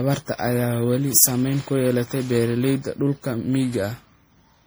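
A speech clip with generation loss running through its whole length. The voice sounds swirly and hollow, with a smeared, watery top end. Consonant attacks blur instead of landing crisply. The damage is heavier than a single lossy pass would leave. The likely cause is repeated MP3 encoding, around ten generations. The character fits a chain at about 64 kbit/s. Each pass requantised on a shifted frame grid, so noise and spectral holes piled up.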